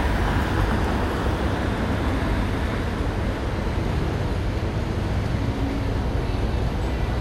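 Everyday sounds, and nothing is technically wrong with the clip.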